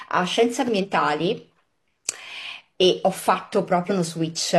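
Twice, around 0.79 to 0.86 s and 3.86 to 3.91 s, there's a short glitch from damaged data in the compressed stream, where the decoder loses sync and hunts for the next frame.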